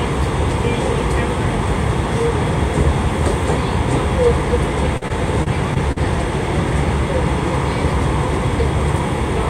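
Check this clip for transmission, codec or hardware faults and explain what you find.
One transmission fault is present. From 4.97 to 5.98 s, repeated packet loss (robotic sound): six gaps up to 44 ms, each patched by extending prior sound, give choppy audio with about 15% concealed.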